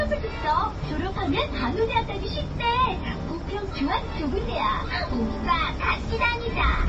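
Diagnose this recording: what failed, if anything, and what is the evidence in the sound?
The failure sits at the codec stage and is likely MP3 compression, running from start to end. Nothing is present above 8.3 kHz, a hard treble cutoff, and the codec damage is plainly audible across the whole clip, which fits a starved bitrate around 32 kbps. The encoder dropped the top band and zeroed weak spectral lines. That frame-to-frame gating of detail is what separates it from a simple analogue low-pass filter, which would dull the treble smoothly without such damage.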